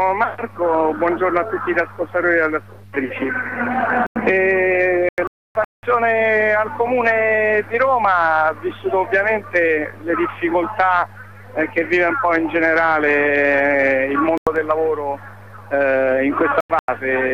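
Four abrupt holes of silence, at 3.66–4.29 s, 5.09–5.83 s, 14.38–14.56 s and 16.56–16.88 s, are corrupt frame muted dropouts: damaged compressed frames were rejected and replaced with silence. The lengths fit runs of several whole frames. The waveform shows flat gaps with hard edges, and the spectrogram shows blank vertical bands.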